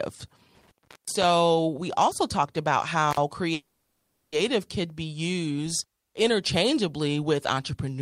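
Speech clip with an intermittent contact twice: crackly dropouts from 0.55 to 1.24 s, open for about 370 ms before "we also talked about", and again at 3.11 to 3.17 s right after it. From 3.53 to 4.34 s there's a call audio freeze, where the last sound is stretched into a fading buzz for about 790 ms. Nothing is lost, but everything after arrives that much later, likely from delayed packets draining the jitter buffer.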